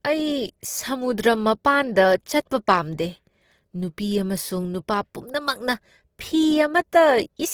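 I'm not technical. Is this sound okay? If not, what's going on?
No. From start to finish the speech has a rough, grainy, noisy texture, most likely from Opus compression squeezing the file hard. Unlike MP3-style damage, it sounds less swirly or watery, and the highs aren't cut off; the detail itself turns gritty.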